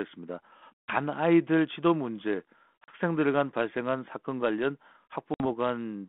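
A speech clip over a G.726 ADPCM line, band-limited to about 3.4 kHz. Packet loss on an ADPCM call cuts hard silent holes at 0.83, 2.84 and 5.34 s, each a few lost packets (60, 40, 60 ms). The decoder's predictor desynchronises, so speech resumes briefly distorted.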